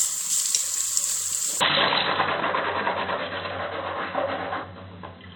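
At 1.6 s the sound turns dull and boxy with no gap, likely an input switched to a poorer device. The spectrogram shows nothing above 4 kHz, a level step of about 5 dB and a new noise floor far below the signal. At 2.39 s compressed frames are skipped: roughly a tenth of a second, about four 24 ms frames, vanishes, leaving a visible jump in the waveform.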